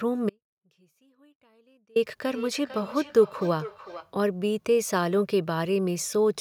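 Speech that cuts out abruptly at 0.30 s and returns at 1.96 s, leaving about 1.66 s in which only a faint trace of the sound remains, roughly 35 dB below its normal level. This is an audio dropout to a faint residue, likely caused by the wanted signal being lost while the path after the break stayed live. From 2.29 s to 4.16 s the speech comes round again at intervals of about half a second, each repeat thinner and more ringing, the loudest about 14 dB below the speech. This is feedback echo between two devices on the same call in one room: one device plays what the other's microphone sent, that microphone picks it up again, and neither echo canceller removes the other device's output.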